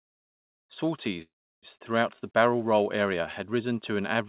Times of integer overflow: none

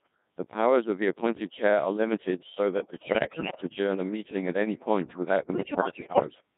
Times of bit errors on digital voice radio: 2.80-3.62, 5.52-6.29

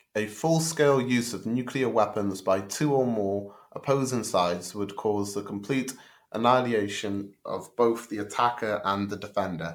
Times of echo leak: none

